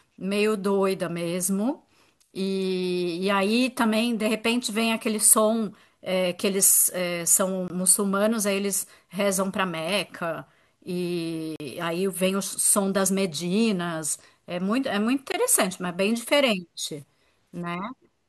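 A speech clip with three blocks of digital silence, at 7.68 to 7.70 s (20 ms), 11.56 to 11.60 s (40 ms) and 15.32 to 15.34 s (20 ms). Each cuts abruptly to silence and back with no fade, the 40 ms one leaving a brief audible hole. Unlike a network dropout, nothing is smoothed over or faded. This points to an output buffer that wasn't filled in time.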